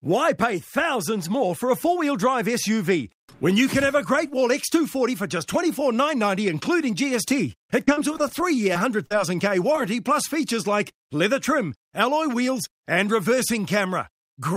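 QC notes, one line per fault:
7.85 to 9.12 s, repeated packet loss (robotic sound): nine dropouts in quick succession, the longest around 43 ms, each patched by stretching the previous sound. About 14% of this stretch is filled-in audio, so it comes across choppy.
9.72 to 9.76 s and 9.76 to 9.79 s, short concealed packet loss: two back-to-back holes of about 20 ms each, bridged by extending the preceding sound and blending back in. You get a quick smear or wobble rather than an obvious gap.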